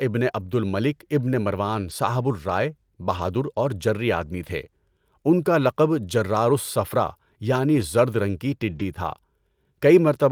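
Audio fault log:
0.39–0.45 s, 1.89–1.91 s, 3.13–3.19 s (between "مروان صاحبُ الرائے" and "اور جری آدمی"), 7.75–7.81 s, 8.71–8.81 s: lost packet rebuilt from error correction. Spans of 40, 20, 40, 40 and 60 ms, consistent with one to three lost packets each, play as rougher, noisier sound with no gap, because a low-bitrate copy stood in. On a spectrogram these show as brief, grainy patches without a silent break in the waveform.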